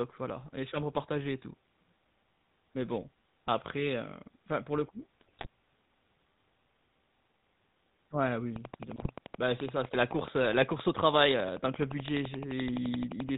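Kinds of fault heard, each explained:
GSM full-rate codec: The whole clip passes through the original GSM speech coder, at 13 kbps, which rebuilds speech from a vocal-tract filter and a coarse pulse excitation. Nothing above 4 kHz survives, and the voice carries a plainly audible buzzy, gravelly roughness throughout.
GSM bit errors: Corrupted bits reach the decoder and garble its filter, pitch and gain values. Right after "enfin pour le coup", from 5.21 to 5.46 s, and again from 8.96 to 9.08 s, the speech breaks into squawks and gargling, consistent with an error rate of a couple of percent.
Train of clicks: From 8.56 s to 13.3 s a regular series of similar pulses ticks over the audio at 11.6 per second, roughly fifty in all, peaking about 10 dB above the signal and continuing through pauses, likely from electrical interference or a faulty connection.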